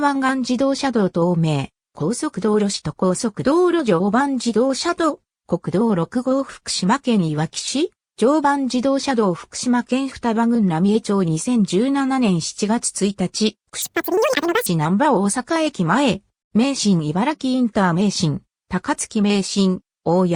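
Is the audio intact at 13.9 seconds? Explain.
No. From 13.82 to 14.66 s the audio is read two samples at a time, so it plays at double speed and an octave (12 semitones) higher.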